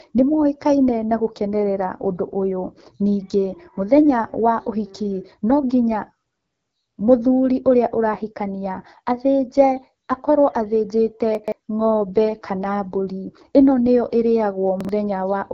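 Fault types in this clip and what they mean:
AMR wideband (HD Voice) codec: The speech is modelled up to 6.4 kHz as pulse-driven vocal tract sound, with the top band filled by shaped noise and nothing above 7.5 kHz. The damage is plainly audible, a rough, raspy texture that fits the low 8.85 kbit/s rate.
Chunks out of order: Blocks of about 43 ms play after the ones meant to follow them, giving hard joins and a jumbled moment. At 11.35 to 11.52 s a chunk lands three places late; at 14.81 to 14.89 s, one place late.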